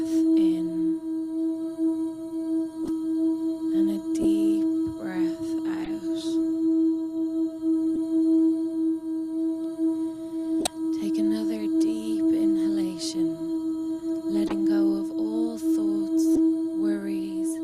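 Corrupt frames decoded at 2.84, 4.22, 5.84, 7.96, 10.61, 14.47 and 16.35 s. The decoder played damaged compressed frames as though they were valid, so misread values put energy at the wrong frequencies. Each event is a short chirp or noise burst lasting from about 20 to about 110 milliseconds. The loudest, at 10.61 and 16.35 s, peak near about -10 dBFS, the one at 4.22 s sits near about -15 dBFS, and the rest sit around about -20 dBFS.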